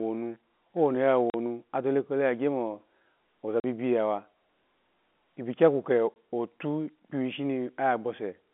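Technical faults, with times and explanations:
1.30–1.34 s, 3.60–3.64 s and 6.14–6.16 s: packet loss filled with silence. Packets of speech went missing on the way, and the receiver played digital silence in their place. This cut holes of 40 ms, 40 ms and 20 ms out of the speech. The even steps fit a 10 ms packet. Each gap starts and stops abruptly. The narrow G.711 telephone band is heard in the speech around it.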